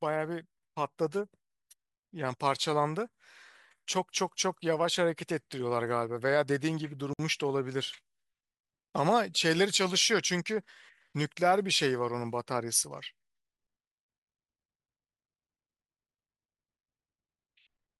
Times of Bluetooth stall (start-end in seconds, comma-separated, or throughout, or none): 7.13-7.19